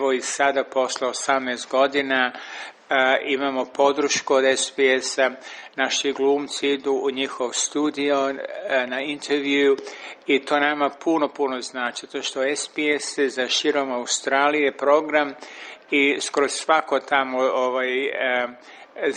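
At 5.59 to 5.65 s, a short stall from a late packet: the jitter buffer ran dry, so the receiver held the last sound for about 30 ms until the packet arrived, then continued where it left off. Nothing is lost, but the sound briefly hangs with a faint buzz or dip, and playback runs 30 ms later afterwards.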